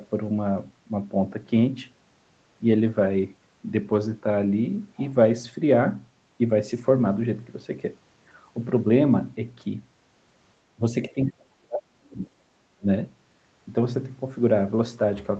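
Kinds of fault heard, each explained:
Speech suppressed in double talk: the speech dips by roughly 20 dB near 10.8 s and 12.8 s, and by roughly 40 dB from 11.1 to 12.2 s, likely an echo canceller treating the talker as echo and attenuating them while the far side spoke.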